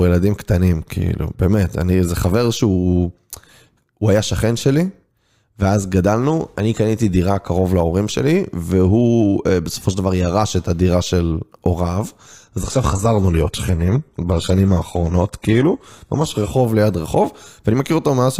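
From 12.53 to 16.53 s the speech plays as an adaptive stream at a lower bitrate. A slowed connection forced a switch that fits a 16 kbit/s HE-AAC stream. Nothing sounds above 12.3 kHz, so the treble drops. Unlike a dropout, quality shifts suddenly with no gap.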